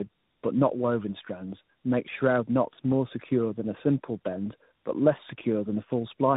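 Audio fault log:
Throughout, tandem speech coding: the speech passes through several low-rate coders in series, each re-encoding the previous one's already degraded output, so the errors compound. It sounds rougher, more muffled and more warbly than any single codec would make it. The character points to roughly three speech coders in a row, likely an AMR-NB stage twice and a G.726 32 kbit/s stage, with 64 kbit/s G.711 links between them. Nothing is present above 3.8 kHz.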